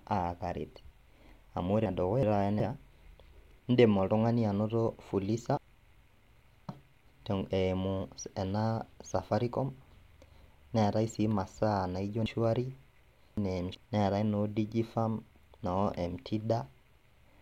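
Chunks out of order occur at 1.86 to 2.60 s, 5.57 to 7.06 s and 12.26 to 13.75 s. Blocks of about 0.37 s each are played in the wrong sequence: one chunk arrives a single chunk late in the first span and three chunks late in the other two. No speech is lost, but it comes out jumbled, with hard joins where the reordered blocks meet.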